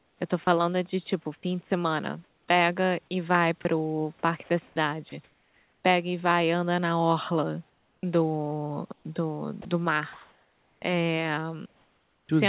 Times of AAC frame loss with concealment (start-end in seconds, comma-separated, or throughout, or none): none